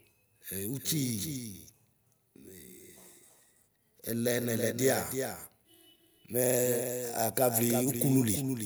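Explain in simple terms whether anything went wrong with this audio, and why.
Doubled audio track, throughout: a slightly quieter copy of the speech trails about a third of a second behind, likely from a slower second path.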